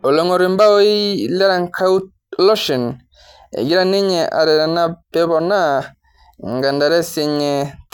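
Nothing in this speech recording stood out as a problem on listening.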